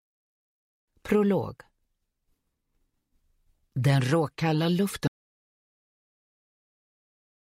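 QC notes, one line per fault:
5.08 s to end: audio dropout to silence. The sound cuts off mid-flow and never returns, leaving about 2.3 s of silence with no room tone underneath. The input was likely lost through a disconnected device, failed link or mute while the recorder kept writing silence.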